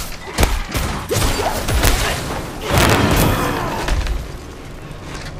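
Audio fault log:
0.43 s, 1.85–1.88 s and 2.78–3.23 s, integer overflow: loud peaks pushed the integer sum about 1 to 3 dB past its maximum, and instead of being limited they wrapped to the opposite sign. Each overshoot flips across the full range, so the sound breaks into violent cracks, far harsher than clipping.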